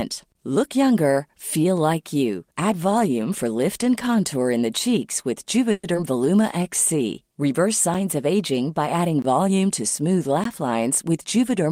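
At 5.71 s the speech stops advancing and a buzzy continuation of the last sound fills the space until 5.85 s. This is a call audio freeze. The packets were likely held up in transit, so the jitter buffer ran dry. The receiver stretched the final sound for 120 ms instead of going silent. When the packets arrived, the speech resumed where it had stopped. Nothing is lost, but the delay grew by 120 ms.

Right after, from 5.93 to 5.96 s, there is a skip ahead. Roughly 70 ms of speech is dropped. The two sides are joined with only a 10 ms bridge, so the sound lurches forward abruptly. This cut recovers some of the delay the freeze added, about 50 ms of it.

From 6.35 to 6.98 s comes a jitter buffer slow-down. The receiver repeated single pitch periods again and again to rebuild its reserve. It added 48 ms in total. The speech runs at 94 percent speed with unchanged pitch, so the sounds in that stretch are slightly drawn out.

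Three blocks of digital silence follow. The first is at 7.94 s and lasts 5.33 ms, which fits a 256-sample block at 48 kHz. The second runs from 9.22 to 9.24 s and lasts 20 ms. The third is at 10.44 s and lasts 16 ms. In each, the output cuts out and back with no fade. The shortest is heard as a tick. The longer two are heard as short holes.

From 11.09 to 11.67 s there is a jitter buffer speed-up. The buffer held more audio than its target, so the receiver cut short pieces of one or a few pitch periods, removing roughly 40 ms. The speech runs at 106 percent speed at the same pitch and sounds slightly hurried.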